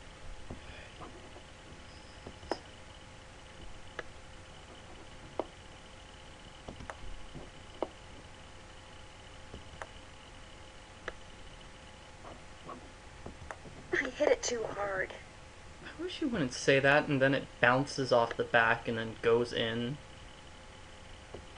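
Nothing in the audio stood out as a technical fault on listening.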